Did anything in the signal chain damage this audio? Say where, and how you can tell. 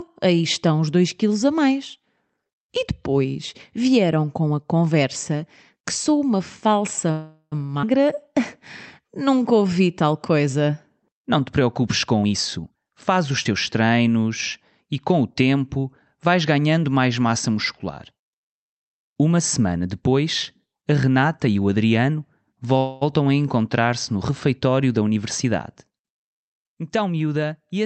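Yes. The damage comes from the network and the call's jitter buffer, not from the Opus coding, whose top end stops near 8 kHz.

A call audio freeze follows "que sou uma falsa" at 7.11–7.54 s, and another occurs at 22.78–23.03 s. Each time the last sound is stretched into a fading buzz, with about 60 ms of silence in the first. The audio then resumes exactly where it stopped. This is likely packets held up until the buffer ran dry. Unlike a skip, nothing is lost.

A skip ahead at 7.82–7.85 s drops roughly a tenth of a second. The two sides are butted together with almost no gap. It differs from a freeze because audio is missing rather than paused. It fits the buffer shedding a backlog after the preceding stall.

A jitter buffer slow-down runs from 8.05 to 9.75 s. Delivery falls to 93% speed, adding 118 ms, with sounds drawn out through repeated pitch periods. The pitch stays put, which rules out a sample-rate mismatch. 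Here the buffer is rebuilding its reserve.

A jitter buffer speed-up appears at 12.22–13.51 s, running at 125% and sounding noticeably hurried. It appears again after "semana depois a" at 21.08–27.69 s, at a subtler 104%. Each removes roughly 0.3 s by trimming pitch periods. The pitch is unchanged, so this is time compression of surplus buffered audio.

A short concealed packet loss smears 13.44–13.47 s, just before "treinos e com o". About 20 ms never arrived, and a 12 ms extrapolated fill covers it. Because the hole was patched rather than jumped, it sounds like a brief wobble, not a skip.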